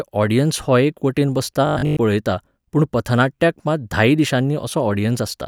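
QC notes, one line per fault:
1.67–1.99 s, robotic sound from repeated short buffers: new audio likely arrived too seldom, so playback looped a 20 ms stretch through most of this span while the real speech was skipped. The looping forces a rigid, metallic 50 Hz buzz between "वटेन बसता" and "पळयता पूण पथनाट्याक मात".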